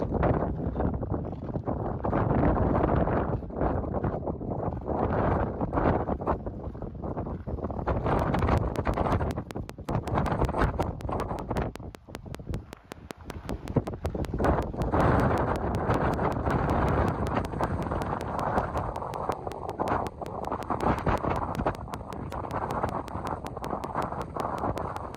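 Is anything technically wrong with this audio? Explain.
Yes. From 8.19 s right through to the end at 25.16 s there's a train of clicks, steady at about 5.3 per second, around a hundred in all. Each one is a sharp tick of much the same shape, poking up something like 15 dB above the sound, and they carry on through the quiet bits too. It's likely interference from nearby gear or a faulty connection or power supply injecting a regular pulse into the signal path.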